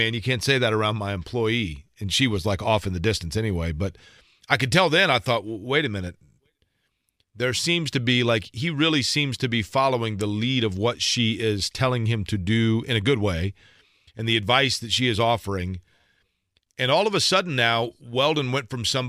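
No technical faults are audible.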